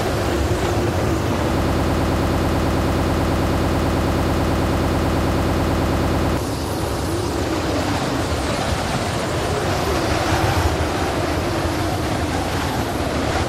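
A broken-record loop runs from 1.62 s to 6.37 s: a fragment of about 0.11 s repeats exactly, 44 times back to back, and the audio due in that span never plays. Unlike an echo, nothing decays; the likely cause is a stalled player or stream.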